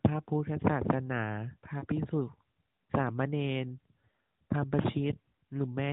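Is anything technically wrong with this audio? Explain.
Yes. Lost AMR speech frames cause two brief dips, at 1.80 to 1.85 s and 4.82 to 4.86 s. Each fits a single missing 20 ms frame. The decoder repeated its last pitch and vocal tract settings at reduced gain, so the speech briefly warbles. On a spectrogram, the harmonics below the narrowband 4 kHz ceiling smear flat for that instant. The waveform shows a small amplitude sag.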